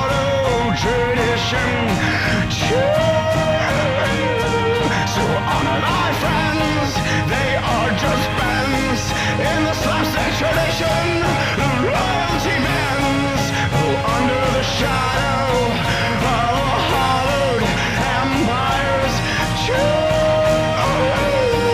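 No faults turn up anywhere in the recording.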